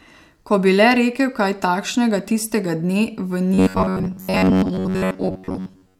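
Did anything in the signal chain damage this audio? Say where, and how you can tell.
Yes. From 3.54 s to 5.99 s the speech turns into robotic sound from repeated short buffers: a rigid, metallic buzz fixed near 93.8 Hz that still loosely tracks the syllables. The stage is likely the driver or buffer, starved of fresh audio and looping the last chunk, about 10.7 ms given that pitch, while most of the real signal is skipped. Unlike codec artefacts, the buzz holds one pitch regardless of the talker's intonation.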